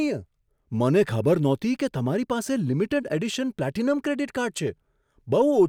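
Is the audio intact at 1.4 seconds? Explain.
Yes, the speech at 1.4 seconds plays through intact, with no dropout, click, distortion or other fault at that moment.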